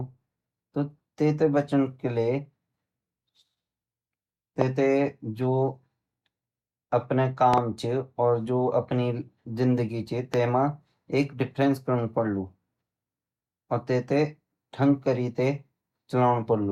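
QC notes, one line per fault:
4.61–4.64 s, 7.54–7.60 s and 10.34–10.36 s, loud pop: a single sharp pop at 4.61 s about 20 dB above the speech, a quick double pop at 7.54–7.60 s, and one more just before "तै मा एक", each about 15 dB up. The speech continues underneath. This is likely a voltage step or pulse from a plug, switch or static discharge, which the following circuitry shapes into a brief thump. The waveform shows tall isolated spikes. The spectrogram shows thin full-height vertical lines.
5.42 s and 11.63–11.69 s, corrupt frame decoded: two short glitches at about -30 dBFS. The first is very brief and spans a couple of frames. The second, between "तै मा एक" and "करनु पडलु", covers a few frames. Damaged bits in compressed frames that were decoded anyway put energy at the wrong frequencies for the length of each frame. The spectrogram shows small blocky patches that break the speech harmonics. 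The waveform barely changes.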